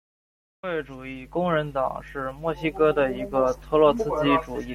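At about 3.99 s, just after "哥的一个", damaged data in the compressed stream produces a brief glitch. The decoder misreads the corrupted frames and loses sync until it finds the next valid header. A spectrogram shows a thin, broadband vertical smear, and the waveform shows an abrupt discontinuity.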